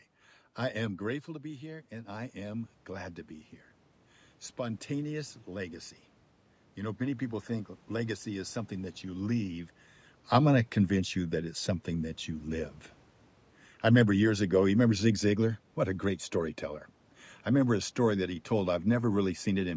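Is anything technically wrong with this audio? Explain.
Yes. There are two automatic gain control faults.

From 0.86 to 9.75 s there is automatic gain rising. The talker moves away from the microphone around 1 s, and the input drops by about 9 dB. The gain control slowly adds about 10 dB, so voice and room noise swell together until just before "I'm going to convince".

From 13.86 to 15.51 s there is automatic gain falling. The gain control judges the input too loud, or its background noise too strong, and pulls its gain down by about 3 dB. The speech and its background sink together over this span.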